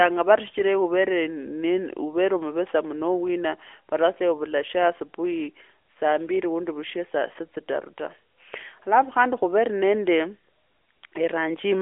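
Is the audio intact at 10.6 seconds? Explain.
Yes, the audio is intact at 10.6 seconds: the speech there carries only the narrowband band-limiting of the AMR narrowband mobile codec at 12.2 kbps, with nothing above about 3.6 kHz and light codec colouring, and no dropout, click or other fault.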